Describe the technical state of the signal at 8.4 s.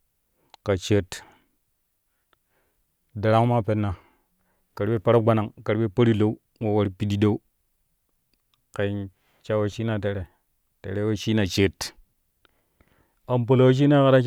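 At 8.4 s the speech signal is intact, with no audible technical fault at that moment.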